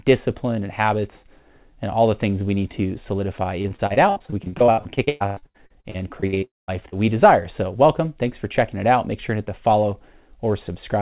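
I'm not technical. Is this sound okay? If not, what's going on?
No. From 3.62 to 6.44 s, right after "we need to solidify", there is repeated packet loss (robotic sound). The speech turns choppy, with many small pieces missing.

From 6.44 to 6.70 s the sound briefly smears and then goes silent for about a fifth of a second. A long network dropout is the likely cause.

From 6.89 to 6.94 s, just before "we desire", a short concealed packet loss causes a tiny smear where a sliver of speech was patched over.

The clip also sounds narrow, like a phone line, because the call carries nothing above 4 kHz.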